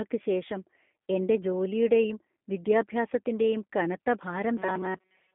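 Throughout the clip, the speech has been squeezed through a low-bitrate voice coder, and the G.729 codec's character is plainly audible: the band runs from about 200 Hz to 3.5 kHz with nothing above 3.6 kHz, which fits an 8 kbit/s G.729A stream. Because the coder rebuilds each frame from a vocal tract filter, a pitch estimate and a few pulses, the voice comes out slightly rough and synthetic.

From 4.57 s to the end at 5.34 s, the audio was likely arriving too slowly for playback, so the software kept replaying a tiny stretch of recent sound while most of the real signal was dropped. That produces robotic sound from repeated short buffers: a rigid, metallic buzz at 188 Hz, which points to a loop of about 5.3 ms, sitting over the speech and only loosely following its rhythm.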